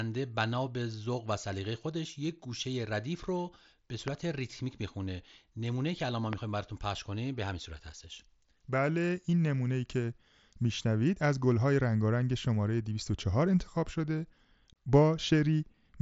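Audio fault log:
4.08–4.10 s and 6.33–6.35 s, loud pop: two sharp single pops standing about 15 dB above the speech, which carries on underneath, likely from a brief voltage pulse such as a switch or static discharge.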